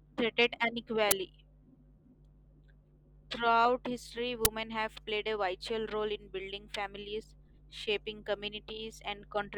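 An uninitialised buffer fault occurs at 1.11 s and again at 4.45 s, the second just before "have played a vital". Each time, a 10 ms block of the speech was sent to the output before any audio had been written into it, so whatever stale data sat in that memory was played as if it were samples. The result is a brief, harsh crack of loud digital noise cutting abruptly into the speech.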